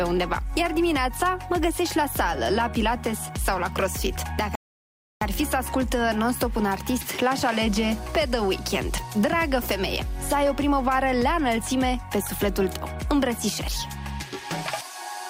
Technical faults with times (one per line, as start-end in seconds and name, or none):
4.55-5.21 rebuffering stall